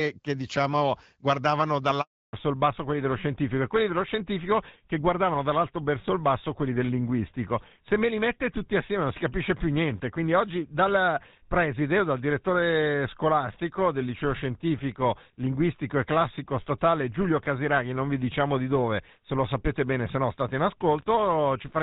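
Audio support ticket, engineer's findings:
Handover gap, 2.01 to 2.33 s: sound fades within tens of milliseconds, then 320 ms of clean silence with no concealment fill, unlike packet loss, which smears or repeats fragments.

Fallback to narrowband, 2.33 s to end: nothing above 4 kHz and a rougher, duller texture, consistent with a switch from HD Voice to GSM full rate. Unlike a plain low-pass filter, the change starts right at the handover and never recovers. Before it, the AMR wideband (HD Voice) codec at 12.65 kbit/s is audible through 2.01 s, with only light coding damage.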